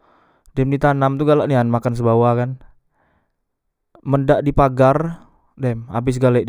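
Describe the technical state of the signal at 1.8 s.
A faint, gritty inharmonic fizz sits on the speech at 1.8 s, as it does throughout: crude rate conversion by unfiltered linear interpolation, fitting a 32 kHz to 44.1 kHz step.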